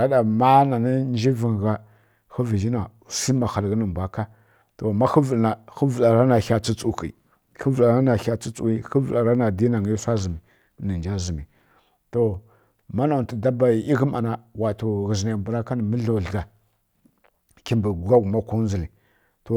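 Nothing goes wrong anywhere in this stretch of speech, so there's simply no fault here to point to.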